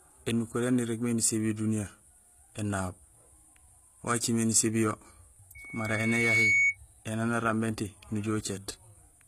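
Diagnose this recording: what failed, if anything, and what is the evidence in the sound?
HE-AAC compression, throughout the speech, at the codec stage. The treble is gritty and metallic, with nothing above 14.9 kHz. This is likely spectral band replication, which copies lower bands upward instead of coding them, and the damage is plainly audible, which fits a bitrate near 20 kbps.

Loudspeaker feedback squeal, from 5.55 to 6.77 s, in the acoustic loop between playback and microphone. A single 2.2 kHz tone swells over roughly 0.7 s to about 5 dB above the speech, because loop gain at that frequency exceeded one.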